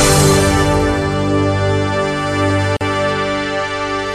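At 2.77 s a gap at a join of encoded pieces cuts in: a gap of about 43 ms, with smeared edges, and the sound resumes where it stopped, unlike a dropout that loses material.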